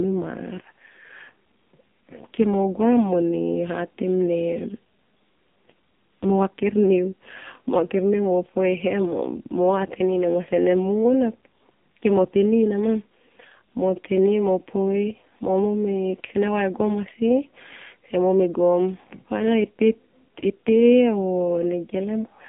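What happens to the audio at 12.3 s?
At 12.3 s the speech is still under the AMR narrowband mobile codec that runs through the whole clip. The codec models the vocal tract and drives it with a few pulses per 5 ms subframe, so nothing above about 3.7 kHz survives and the line band sits at roughly 150 Hz to 3.6 kHz. The damage is heavy, with a buzzy, synthetic voice quality that points to one of AMR-NB's lowest modes, around 6 kbps.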